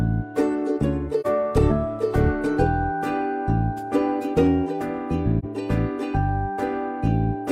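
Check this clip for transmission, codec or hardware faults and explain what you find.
Two short dropouts are present, both AAC frame loss with muting, at 1.21 to 1.26 s and 5.39 to 5.45 s. Each time, one coded frame of about 43 ms was lost and the decoder zeroed its spectrum rather than inventing content. Because AAC frames overlap, the sound fades down and back up across roughly one frame instead of cutting off. Each dropout is a brief dip.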